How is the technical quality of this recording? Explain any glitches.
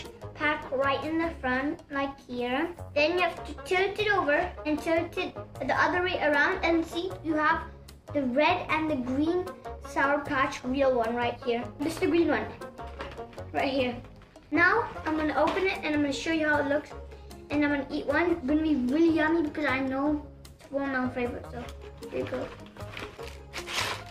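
Not great: there's a steady timing problem running through the whole thing.

Clock drift between sender and receiver is present throughout. The sending end's clock runs roughly 4 percent fast, so audio arrives a little quicker than the receiver plays it out and its jitter buffer keeps creeping toward full. You hear that drift through the corrections it forces.

Repeated timing corrections run from 0.04 s to 24.05 s, with the material effectively moving at 104 percent speed. To keep up, the receiver keeps trimming out short slices, always dropping rather than repeating, at uneven gaps. You get little skips and a slightly lurching, hurried tempo.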